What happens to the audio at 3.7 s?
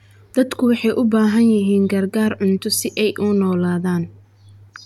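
Nothing goes wrong at 3.7 s; the speech carries on intact through that moment, with no dropout, click, distortion or other fault.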